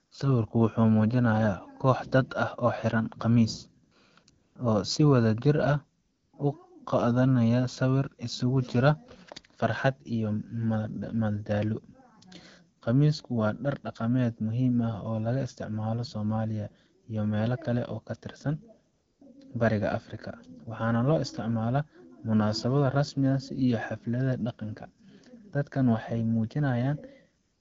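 AMR comfort noise fills the gaps at 0.05–0.11, 3.85–3.91, 4.23–4.27, 4.29–4.55, 6.01–6.33, 12.79–12.81, 18.93–19.21 and 27.43–27.60 s: speech frames stop and smooth synthetic hiss replaces the real background, appearing as flat, uniform spectrogram patches with abrupt edges.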